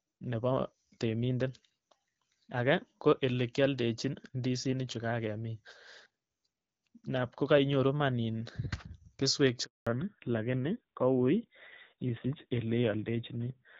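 A network handover interrupted the call at 9.65 s: while the phone switched links, no speech frames got through for 220 ms. The speech cuts away within a few tens of milliseconds and the line stays silent until 9.87 s, so whatever was said across that stretch is missing rather than merely quiet. The result is an abrupt hole in the middle of the speech.

When the new link comes up at 9.87 s, the call falls back to narrowband and stays there to the end. Before this point, the clear wideband sound with only light coding damage fits AMR-WB at 12.65 kbit/s. Afterward, nothing above 4 kHz survives, and the rougher texture fits AMR-NB at around 7.4 kbit/s. The speech loses its crisp sibilance and airy top end, turning dull and rougher.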